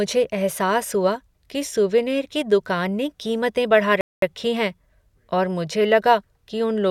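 A rebuffering stall hits this speech recording from 4.01 to 4.22 s, just after "दुकान ने कीमतें बढ़ा". The player ran out of downloaded audio and fell silent, then resumed exactly where it stopped. Nothing is missing, but 214 ms of dead time is added.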